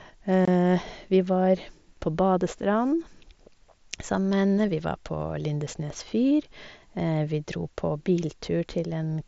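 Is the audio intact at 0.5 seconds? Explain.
No. Just before that moment, from 0.45 to 0.48 s, unconcealed Bluetooth headset packet loss dropped about 22 ms of the mSBC wideband link, which fits three lost frames, and silence or an idle pattern stood in. The speech breaks off in a short hole with abrupt edges.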